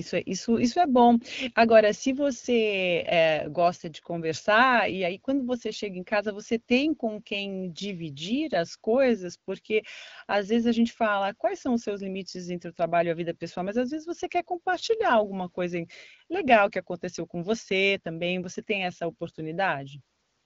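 Speech, with no technical faults to report.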